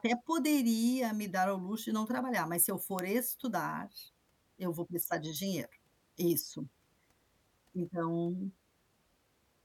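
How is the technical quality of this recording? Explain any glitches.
Two isolated clicks are the only faults in this speech recording. Bit error spikes occur at 1.04 s, just before "me dar ao luxo", and at 2.99 s, right after "trabalhar mas se eu". Each is a single corrupted sample whose value jumped by a power of two and immediately returned, as when one bit flips in memory or on a digital link. The result is a brief, broadband tick unrelated to the speech: at about -35 dBFS, then much louder at about -11 dBFS.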